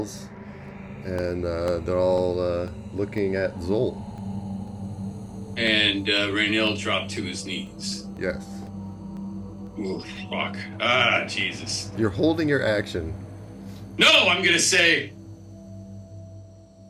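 From 0.18 s to 10.17 s the audio carries periodic USB or driver dropouts: brief gaps, each around a millisecond long, recur every 0.5 s, about twenty in all. Each gap is filled with silence, so the waveform is cut abruptly and resumes, producing a regular tick that is audible wherever there is signal. The fixed spacing points to a background process stalling the USB bus or audio driver on a timer.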